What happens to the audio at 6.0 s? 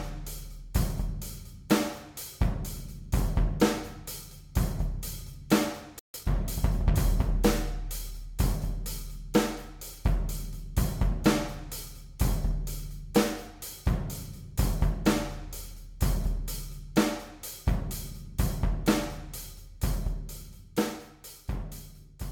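At 5.99 s the sound cuts off in mid-flow and stays silent until 6.14 s, a gap of about 150 ms, then carries on. This is a playback stall: the player most likely ran short of data or had its thread held up, so output stopped until it caught up. On a waveform the trace drops abruptly to a flat line for that span. A spectrogram shows a clean vertical band of empty energy across all frequencies.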